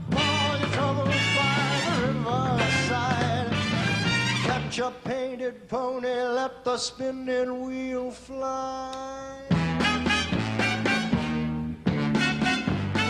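No technical faults are audible.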